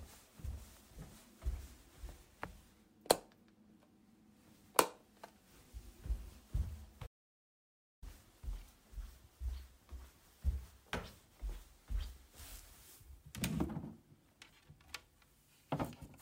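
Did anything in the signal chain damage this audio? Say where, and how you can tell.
Yes: an audio dropout to silence, most likely from the input link or capture device losing signal while the recorder kept writing silence. From 7.07 s to 8.02 s the sound stops abruptly and resumes mid-flow; the 955 ms gap is silent with no room tone, so that stretch is gone.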